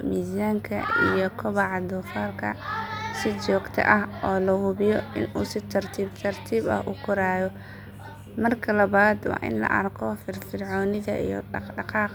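No technical faults can be heard in this speech at any point.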